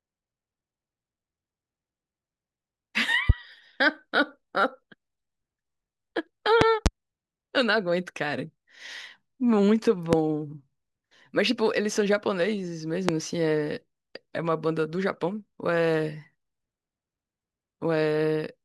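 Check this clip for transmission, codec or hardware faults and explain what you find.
Five loud pops break into the speech. Loud pop at 3.30–3.32 s, 6.61–6.89 s (a double pop), 10.13–10.16 s and 13.09–13.11 s: a sudden voltage step, likely from a plug, switch or static, adds sharp thumps about 20 to 25 dB above the speech, which continues underneath.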